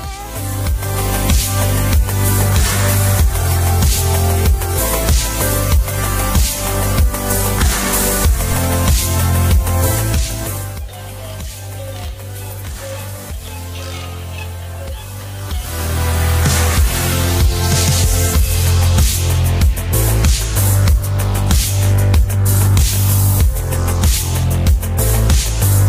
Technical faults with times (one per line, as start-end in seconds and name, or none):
8.52-8.62 phantom power thump